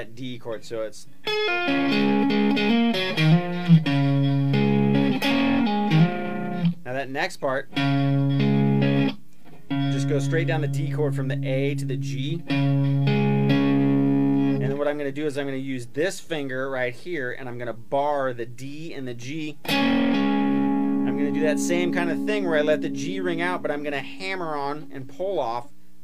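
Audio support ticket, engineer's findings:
No audible faults found on review.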